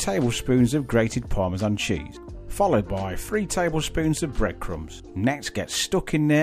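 Nothing goes wrong anywhere in this audio, so there's simply no fault to point to.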